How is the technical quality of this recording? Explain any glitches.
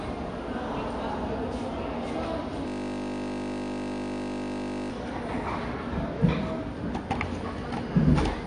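The technical quality is poor: the whole recording is dull and smeared by lossy compression, and in the middle the sound locks into a loop for over two seconds.

Throughout, the audio has a muffled, fizzy quality, with plainly audible smearing and nothing above about 9.8 kHz. This is likely AAC compression at a low bitrate, around 32 kbps. The encoder saves data by discarding high frequencies and quantising the remaining spectrum coarsely against a hearing model. That lowers the bandwidth and leaves a warbling texture on sustained sounds.

From 2.68 to 4.91 s, the sound turns into a steady, mechanical buzz. This is a system hang loop. The computer or driver stalled while the audio hardware kept replaying the same 20 ms stretch of its buffer, over a hundred times in a row. Because each loop is so short, the repeats merge into a tone at the 50 Hz loop rate instead of a stutter, and the original sound disappears until playback recovers.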